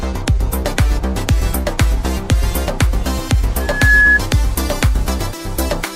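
At 3.59 s a loudspeaker feedback squeal kicks in: a single tone at 1.7 kHz that swells over roughly a third of a second and peaks at about 5 dB above the rest of the sound, then cuts off at 4.20 s. What's happening is the mic is hearing its own speaker, and at that one frequency the loop gain tips past one. The tone then keeps feeding itself until the loop gets broken.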